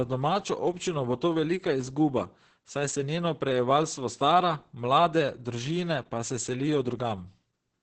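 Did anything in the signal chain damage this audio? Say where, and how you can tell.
Yes, at the codec. It's Opus voice compression all the way through: nothing above 8.9 kHz, and the speech sounds hoarse and faintly robotic from coarse SILK coding, which suggests roughly 10 kbps.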